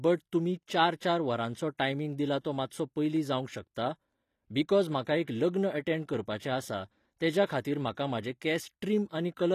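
From start to finish the treble of this speech sounds synthetic: the s sounds come out gritty and lispy, with a metallic sheen over the upper range that never quite matches the body of the voice below it. This is likely HE-AAC compression at a low bitrate, one that fits about 24 kbps, where only the lower spectrum is coded and the highs are rebuilt by copying lower bands upward, so their harmonics fail to line up with the real ones.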